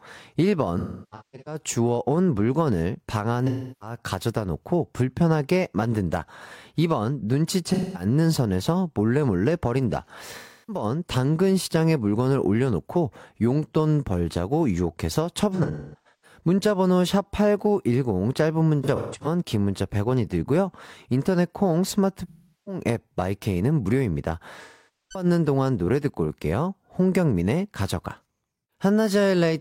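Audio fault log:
0.78–1.61, 3.47–3.96, 7.67–8.05, 10.38–10.83, 15.54–16.40, 18.83–19.27, 22.28–22.80 and 24.63–25.25 s: AAC frame loss with concealment. Chunks of the speech stream drop out, about 0.2 to 0.6 s each, some in scattered bursts. The decoder patches the gaps by guessing from the last good spectrum, so each gap turns smeared, noisy or phasey.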